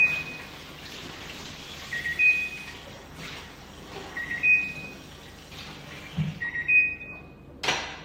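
Around 0.95 s there's a call bitrate drop: the bandwidth estimate dips and the encoder gets starved, coarsening everything and dulling the top end. It sounds rough and watery, which fits a fall from roughly 48 to 15 kbps, and clears up at 2.07 s.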